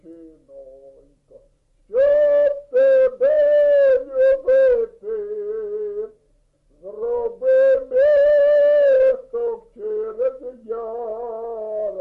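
A wrong sample rate runs through the whole clip: everything plays at about two-thirds speed and roughly seven semitones low, so the sound drags and sits heavy. That ratio fits audio recorded at 48 kHz being played back at 32 kHz without conversion.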